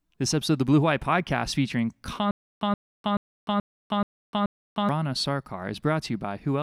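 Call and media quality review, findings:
Stutter with silent gaps, 2.31–4.89 s: a 127 ms speech fragment replays six times, each followed by about 300 ms of digital silence, repeating every 430 ms. Likely a stalled player or stream re-issuing its last buffered fragment at each retry, then running dry. Speech due in that span is lost.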